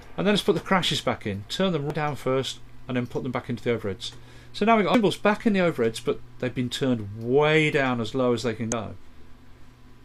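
Short blips pop up at 1.90, 4.94 and 8.72 seconds, each a few milliseconds of damaged data in a compressed stream. Corrupted bytes there make the decoder misread a frame and lose sync until it finds the next header, so you get a brief chirp, squawk, click or short hole.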